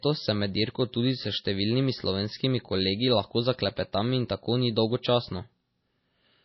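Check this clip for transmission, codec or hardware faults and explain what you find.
One codec fault runs through the whole speech clip. Heavy MP3 compression is the likely cause: nothing survives above 5.8 kHz, and the plainly watery, swirly texture fits a bitrate near 24 kbps.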